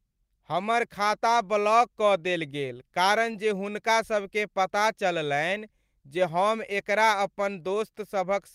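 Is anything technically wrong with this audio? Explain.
Yes. There is clock drift between sender and receiver throughout. The sender's audio clock runs roughly 3% slower than the receiver's, so the jitter buffer keeps draining and the receiver must keep filling the gap. This leaves small timing hiccups at uneven intervals across the speech.

From 0.16 to 8.30 s, the receiver makes repeated timing corrections, duplicating short pieces of audio to stay in step with the slower sender. These add about 0.3 s and pull the pace to 97%, heard as faint hiccups and a slightly unsteady tempo.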